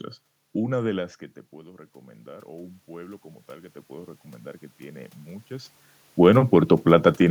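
From 0.92 s to 4.19 s there is automatic gain rising. The speech input drops by about 19 dB, and the control slowly adds about 9 dB, so voice and room noise swell together. The waveform envelope ramps upward, and the spectrogram's noise floor brightens with the speech.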